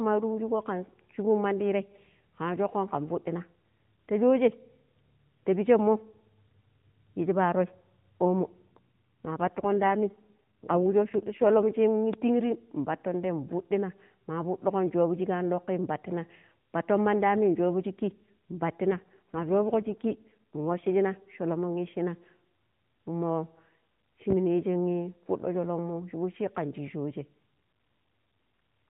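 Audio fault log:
8.42–11.64 s and 18.91–20.88 s, AMR rate drop: The speech turns rougher, buzzier and more synthetic, which fits the codec falling from 12.2 to 5.9 kbps. Fewer bits describe each frame. The band stays narrow, with no gap. Quality returns afterwards.
12.14–12.17 s and 24.30–24.34 s, loud pop: A single sharp pop sits on top of the speech each time, peaking about 15 dB above it. The speech continues underneath. A brief voltage step from a plug, switch, static or driver glitch is the likely cause.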